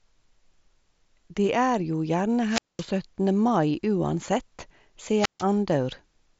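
At 2.45 s the speech runs into a wireless microphone squelch dropout that lasts until 2.89 s. The radio link from the analogue FM microphone fades. Hiss rises. The receiver's squelch then shuts the output, leaving a hole of near silence for about 213 ms. The speech then comes back.

At 4.26 s there is a concealed Bluetooth headset packet loss. About 7.5 ms of audio went missing between headset and phone, which fits a single lost frame. The receiver filled the gap by repeating a matching piece of the waveform it had just received. Because the gap is so short, the patch is nearly hidden. The mSBC headset link carries the rest with a slight graininess on louder sounds.

A second wireless microphone squelch dropout runs from 5.16 s to 5.45 s. The pattern is the same. The signal weakens, static swells, and the squelch mutes the output for about 144 ms. Then the speech returns.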